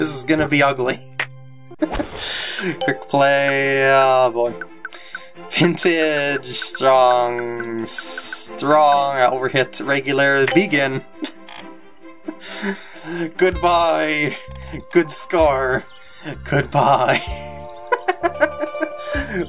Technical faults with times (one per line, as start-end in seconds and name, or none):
none